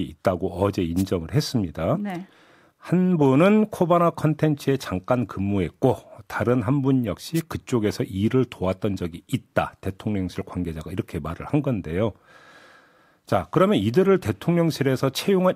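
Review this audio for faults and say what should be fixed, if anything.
Two brief bursts of static swish across the speech, from 0.97 to 1.03 s and from 7.35 to 7.41 s. These are wireless microphone noise hits: the analogue FM radio link faded momentarily as reflected signals cancelled, letting receiver noise rise above the voice. Prevent them with diversity receivers, line-of-sight antenna placement and a shorter transmitter-to-receiver distance.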